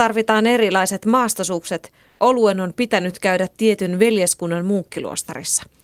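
Just after "erilaiset maastosukset", from 2.07 to 2.19 s, the real background is replaced for about 120 ms by comfort noise, likely because discontinuous transmission (Opus DTX) paused sending during a gap in the speech. The substitute sits at the same level as the background, about 43 dB below the loudest speech, but sounds steady and featureless. On a spectrogram, the fine background texture gives way to a smooth, uniform band; the waveform shows an evenly grained low-level strip.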